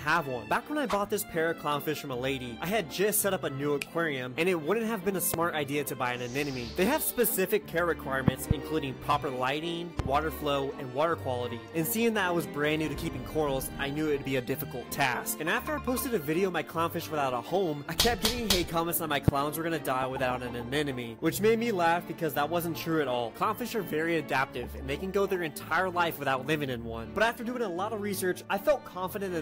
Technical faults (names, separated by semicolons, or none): loud pop